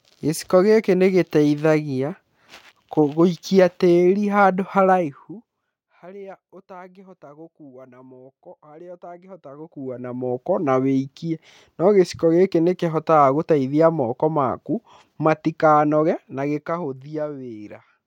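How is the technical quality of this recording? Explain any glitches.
The speech carries audible zipper noise during three level moves. From 4.88 to 5.82 s the level falls by about 25 dB, from 9.27 to 10.34 s it rises by about 25 dB, and from 16.06 to 17.26 s it drops by about 15 dB. Each move has a fine ticking, zipping texture over the speech. The gain changes in small unsmoothed jumps, roughly a hundred per second, and each jump leaves a tiny click.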